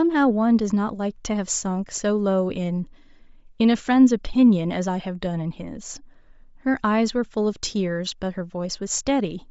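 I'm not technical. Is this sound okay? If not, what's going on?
No. Throughout, the speech has a breathy, grainy edge with a dull, hissy top end, likely from Bluetooth LC3 compression discarding fine detail and filling gaps with noise.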